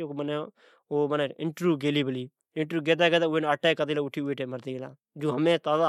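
No dropouts, distortion, noise bursts or other technical faults can be heard anywhere in the recording.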